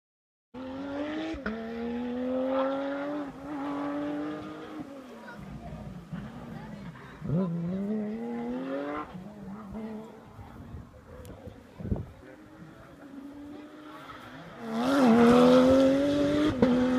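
No technical faults heard anywhere in the clip.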